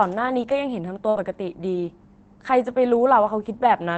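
At 1.09 s a burst of packet loss interrupts the speech for about 70 ms, until 1.17 s. The decoder extends the last sound for roughly 51 ms as a decaying buzz or hiss, then resumes with about 60 ms of speech skipped.

Immediately after, from 1.17 to 1.19 s, and again from 2.95 to 2.97 s, a lost packet is rebuilt from error correction. The 20 ms frame comes from a low-bitrate copy carried in the next packet, so there is no gap, but it sounds rougher and noisier than its surroundings, against the Opus call path's 8 kHz bandwidth.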